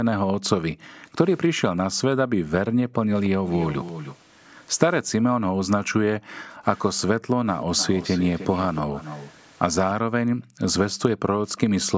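Background gated by the echo canceller, from 0.33 to 1.03 s and 2.32 to 3.0 s: while the far end played over a loudspeaker, the canceller clamped the microphone down by about 40 dB, so the room tone briefly drops out and then returns.

Echo leak, from 3.24 to 4.17 s: a delayed copy of the sound arrives about 290 ms late and about 15 dB down, likely because the loudspeaker side's echo canceller let part of its microphone pickup through.

The gating returns from 5.37 to 6.5 s, with around 0.7 s of dropped background.

The echo leak comes back from 7.6 to 9.32 s at the same delay and level.

Further gated dips follow from 10.0 to 10.62 s and 11.16 to 11.45 s.

A last faint scrap of echo appears from 11.49 to 11.59 s, about 30 dB down.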